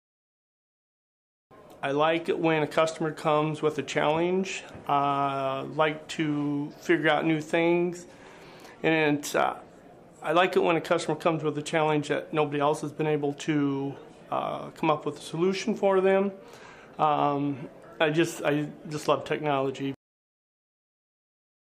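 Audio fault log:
No fault can be heard anywhere in the clip. Nothing in the sound stands out as a defect.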